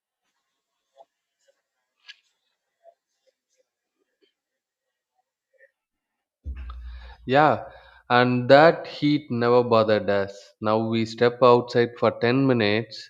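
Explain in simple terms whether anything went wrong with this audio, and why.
Nothing went wrong with this recording: the signal holds steady throughout, with no dropouts, interruptions or other technical faults anywhere in it.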